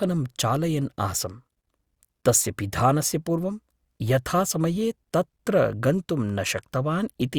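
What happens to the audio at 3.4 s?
Nothing goes wrong at 3.4 s; the speech there is intact, with no dropout, click, distortion or other fault.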